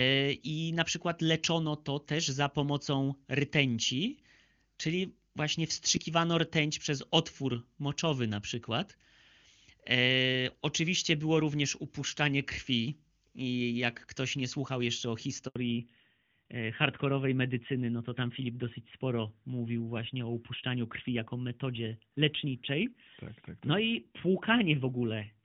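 At 15.48 s the speech cuts out abruptly, falling away within a few tens of milliseconds and leaving a silence of about 80 ms before sound returns at 15.56 s. This is a handover gap: the call was being passed from one network to another, and for the duration of the switch no speech frames reached the receiver, so whatever was said in that short window is simply missing rather than muffled.

From 15.56 s to the end, the speech sounds duller and rougher, with nothing left above 4 kHz. This is a fallback to narrowband. Before the gap the clarity points to HD Voice running at a high wideband rate, which fits AMR-WB at 23.85 kbit/s with at most faint coding damage. After the handover, the call came back on the older narrowband codec, which fits AMR-NB at 12.2 kbit/s, and that codec cannot carry anything above 4 kHz.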